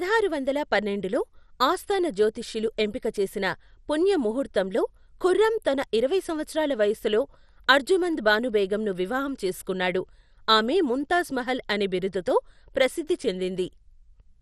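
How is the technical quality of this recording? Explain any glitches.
The technical quality is compromised by audible codec damage running through the whole recording. Throughout, the speech sounds dull, with a gurgling, granular roughness on the voice and nothing above about 14.3 kHz. The likely cause is MP2 compression at a low rate, which fits roughly 64 kbps. MPEG Layer II divides the spectrum into 32 sub-bands and rations bits among them. With a tight budget, upper bands drop out and flicker, while the remaining ones are quantised coarsely, producing this grainy, watery texture.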